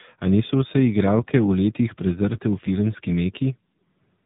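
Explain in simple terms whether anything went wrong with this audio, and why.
Tandem speech coding runs through the whole clip. The speech was squeezed by one phone-network speech coder, unpacked, then squeezed again by a second one further along the route. Each coder throws away detail it judges unimportant, and the second works on sound the first had already roughened. The result is speech that sounds gritty, dull and wobbly, with nothing above about 3.8 kHz, worse than a single coder would leave it.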